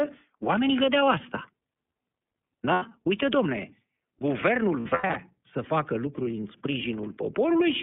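Speech that sounds plainly rough and synthetic, confined to a telephone band of roughly 200 Hz to 3.5 kHz with nothing above. This is the iLBC codec, a narrowband VoIP coder that handles each 30 ms frame on its own, at a rate that fits its 13.33 kbps mode. The lost iLBC frames come through as short stretches where the sound turns into a held, buzzy or breathy tone instead of moving on: once from 2.73 to 2.83 s, about 90 ms, and again in scattered bursts between 4.8 and 5.16 s, about 240 ms in all, the longest run lasting around a tenth of a second. In each gap the decoder filled the missing audio by repeating the last pitch cycle mixed with noise. Because every frame stands alone, the speech comes right again almost as soon as packets resume.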